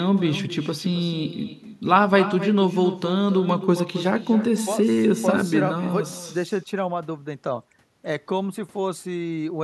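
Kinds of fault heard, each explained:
Echo with no canceller: the far end plays the call through a loudspeaker that its microphone picks up, and nothing strips that out, so the speech returns after roughly a third of a second as a thinner copy about 11 dB quieter, trailing every phrase throughout.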